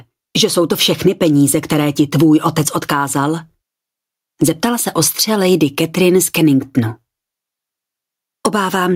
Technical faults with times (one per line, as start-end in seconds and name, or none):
0.00-8.95 gain pumping